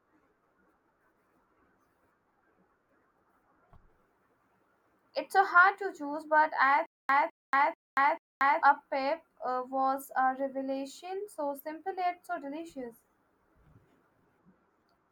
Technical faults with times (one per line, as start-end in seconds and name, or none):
6.86-8.62 stutter with silent gaps